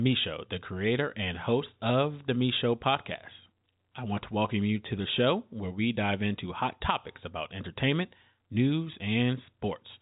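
No technical faults are audible.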